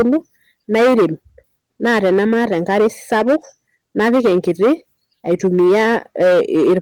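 Hard clipping runs through the whole clip, from start to finish. The speech was driven about 14 dB past what a stage in the chain could pass, so every peak hits the ceiling and is sliced flat, with around a tenth of the samples pinned at the limit. Those squared-off tops generate harmonics far up the spectrum, heard as a constant harsh fuzz and crackle on the louder syllables. The light Opus voice coding doesn't mask this distortion.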